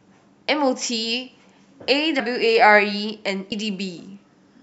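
Speech with compressed frames skipped twice: at 2.18–2.20 s about three frames, roughly 70 ms of audio, drop out, and at 3.51 s about four frames, roughly 100 ms. Each jump fits whole 23.2 ms codec frames being lost or rejected as damaged.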